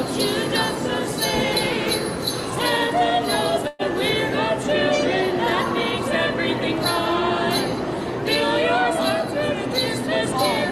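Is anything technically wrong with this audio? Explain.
Yes, there is a burst of packet loss from 3.67 to 3.82 s. Several packets went missing in a row, so the receiver stretched the last sound over about 115 ms, fading it, and about 120 ms of audio never arrives. Unlike a dropout, nothing falls silent; the sound is smeared and then skips ahead.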